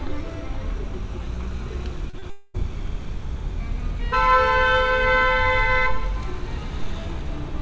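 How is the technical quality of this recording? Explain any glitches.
The recording has a cluster of network glitches packed into about half a second, from 2.10 to 2.56 s. The call-path band limit also means nothing is heard above 8 kHz, which fits a G.722 wideband link.

Short concealed packet loss, at 2.10 to 2.15 s and again at 2.19 to 2.24 s: each time, about 40 ms of audio arrived too late for the decoder. The receiver made up roughly 30 ms by extending the preceding sound, either as continued pitch or as shaped noise, then crossfaded back into the real signal. What you hear is two quick smears or wobbles in a row.

Long network dropout, from 2.30 to 2.56 s: this is likely a stretch of about 240 ms where no packets got through. The receiver covered nearly all of it, around 236 ms, by stretching out the last sound. That produces a synthetic buzzy or hissy tail that decays, with no clean silence before the audio resumes. 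The original content from that quarter-second is gone, so the sound picks up later than it should.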